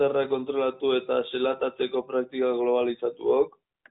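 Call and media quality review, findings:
No faults found in this clip.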